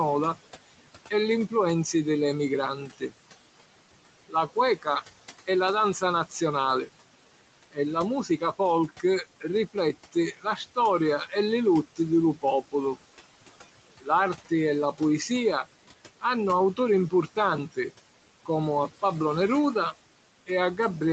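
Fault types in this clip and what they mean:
Noise suppressor artifacts: The suppressor treats steady noise in each frequency band as something to remove, frame by frame, and here pulls it down by about 18 dB. The room noise sinks between phrases and rises again under the speech.
Speech cut by the noise suppressor: The suppressor misjudged parts of the speech as noise and lowered them with the background, by up to about 17 dB. Soft sounds come out swallowed at 2.88 to 3.12 s and in brief scattered moments across 4.29 to 12.74 s and 14.01 to 19.03 s.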